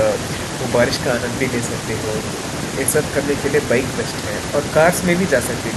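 Nothing in this speech clip stands out as a technical fault; the sound carries on steadily with no audible problems to point to.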